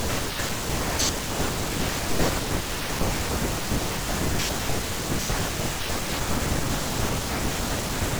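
No technical faults are audible.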